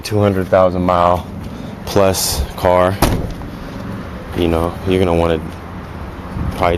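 No technical faults can be heard anywhere in the audio, and the signal stays intact throughout.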